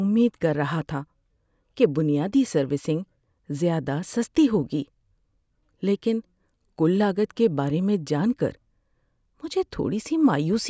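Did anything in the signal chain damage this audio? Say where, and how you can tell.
No, nothing in the signal chain damaged this speech.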